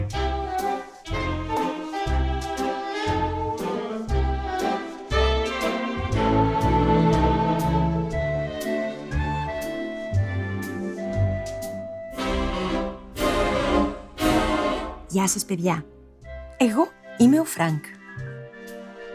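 No technical faults can be heard anywhere here.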